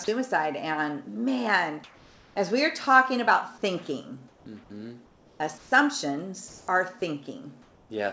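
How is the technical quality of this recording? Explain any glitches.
The recording has two kinds of fault, both from silence suppression in the transmission, heard over a band that stops at 8 kHz, which fits a G.722 wideband call codec.

Sound dropped by the voice detector, 0.04 to 0.08 s: the sender's detector likely judged the opening sound to be background and stopped sending. For 40 ms the real sound is lost and steady synthetic noise stands in until transmission resumes.

Comfort noise in place of the background, at 1.84 to 2.36 s, 4.28 to 4.46 s, 5.06 to 5.40 s, 5.58 to 5.72 s, 6.48 to 6.68 s and 7.62 to 7.90 s: during pauses the sender likely stopped transmitting, and the receiver filled each gap with generated noise. The background, about 26 to 32 dB below the loud parts, turns flat and featureless. It mostly drops by about 2 to 5 dB and rises about 1 dB at 6.48 s.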